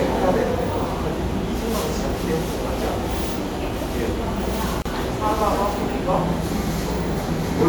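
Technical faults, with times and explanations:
4.82 to 4.86 s, gap at a join of encoded pieces: the continuous sound drops into a 35 ms gap whose silent part is shorter because its edges are softened, then resumes exactly where it left off with nothing skipped. Two separately encoded pieces were spliced together without trimming. The encoder's start-up delay on one piece and the padded final frame on the other both stayed in, and the codec blurred the cut edges.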